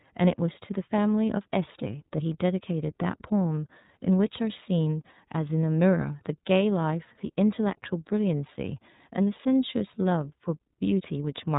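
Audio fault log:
throughout, iLBC codec: the speech was squeezed through the narrowband iLBC coder, in what sounds like its 13.33 kbps mode with 30 ms frames, each frame's excitation rebuilt on its own rather than from the one before. The result is plainly audible: nothing above 3.8 kHz survives, so sibilants and breath lose their air, and the rebuilt excitation leaves the voice clear but rough and faintly synthetic, with a grainy, buzzy edge.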